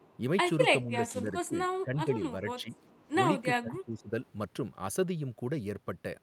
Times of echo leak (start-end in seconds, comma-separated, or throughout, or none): 0.00-0.16, 2.76-2.98